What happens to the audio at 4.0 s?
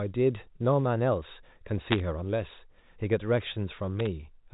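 Bit errors on a digital phone line strike from 3.99 to 4.07 s, a burst touching only a handful of frames. The path sounds like G.711 mu-law telephone coding. Each corrupted bit rewrites a single 8-bit logarithmic sample, and at an error rate of around 0.3 percent several samples are hit. Errors landing on a sign or high-order bit throw a sample far from its true value, so the speech gains sharp ticks and a brief crackle.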